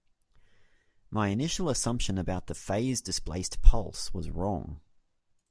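No technical faults can be heard anywhere in the speech. There is nothing at any point in the recording to mark with a time.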